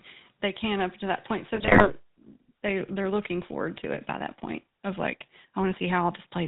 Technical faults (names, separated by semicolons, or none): GSM full-rate codec; GSM bit errors